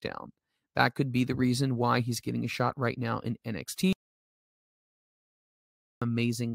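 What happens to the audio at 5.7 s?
At 5.7 s the speech is inside an audio dropout to silence that runs from 3.93 to 6.02 s, about 2.09 s of lost audio. It begins right after "shot right now in", when the sound stops mid-flow and the room tone vanishes with it. The likely cause is the input being lost while the recorder kept writing silence. On a waveform this shows as a flat line, and a spectrogram shows a blank band across all frequencies.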